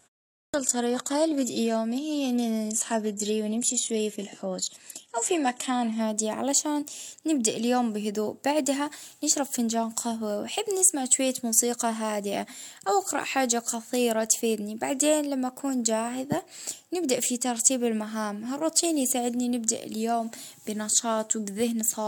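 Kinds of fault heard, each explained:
Adaptive stream starting at a low bitrate: the player began on a low-quality rendition, so until 6 s nothing above 12.3 kHz survives, then quality jumps cleanly.
Clipped start after a pause: the output device was still waking after 0.34 s of silence, swallowing 197 ms, so the sound bursts in without its opening.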